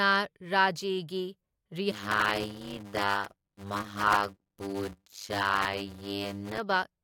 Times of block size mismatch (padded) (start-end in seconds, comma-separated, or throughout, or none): 1.91-6.58